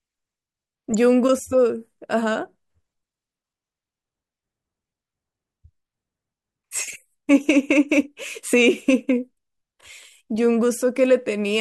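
At 0.91 to 0.95 s and 6.85 to 6.96 s, corrupt frames with flipped bits are decoded anyway. The result is brief chirpy bursts, seen as short vertical smears on a spectrogram.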